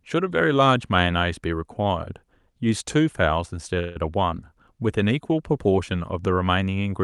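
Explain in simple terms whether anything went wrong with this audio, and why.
Around 3.79 s, the data carrying the sound was likely held up on its way through the call, and the receiving side ran out of audio to play. It filled the wait of about 0.16 s by stretching the last sound into a brief fading buzz. That is a call audio freeze. When the data arrived, the speech picked up exactly where it had stopped at 3.97 s, so nothing was lost, but everything after that point plays about 0.16 s later.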